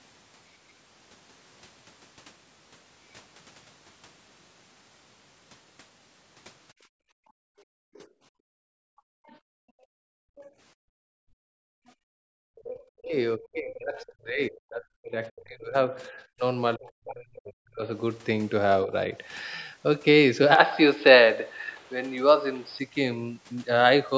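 From 6.73 to 12.31 s the room background is gated by the echo canceller. For most of that stretch the canceller clamps the microphone hard, pulling the ambient floor down by about 40 dB, so the room tone drops away and then returns. On a waveform the low-level noise between phrases flattens almost to a line. A spectrogram shows the broadband noise floor going dark in blocks that begin and end abruptly.

Inside that gated span, at 7.93, 9.26, 10.36 and 11.87 s, faint scraps of the other side's voice leak through. Each lasts between a twentieth and a seventh of a second and sits roughly 30 to 40 dB below the talker. This is likely the far end's loudspeaker output that the canceller failed to subtract. On a spectrogram they appear as brief, weak harmonic smears in otherwise empty gaps.

From 12.59 to 17.9 s the talker's speech is suppressed in double talk, likely because the canceller could not tell the near voice from the loudspeaker echo while both were active. 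For about three seconds in total the voice dips, by as much as roughly 40 dB. Another, shallower dip of around 10 dB comes at 18.85 to 19.09 s. The waveform envelope shows notches cut out of continuous speech. The spectrogram shows harmonics fading or vanishing mid-syllable, below the 8 kHz ceiling of the call path.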